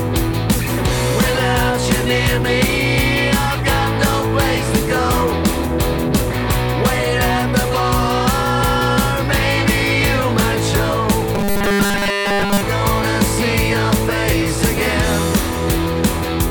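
From 11.35 to 12.63 s the sound turns into a rigid, metallic buzz pitched at 200 Hz, with essentially all of that stretch affected: robotic sound from repeated short buffers, likely caused by audio arriving too seldom and the gap being filled by looping a 5 ms slice.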